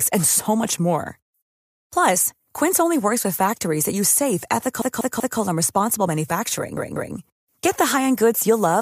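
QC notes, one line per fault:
4.82–5.39 s and 6.77–7.15 s, repeated frames: a 192 ms block replays identically, three extra times after "factories that use safe" (before "and responsible") and twice later, adding 576 ms and 384 ms. Unlike a dropout, nothing is lost. Sound stutters forward.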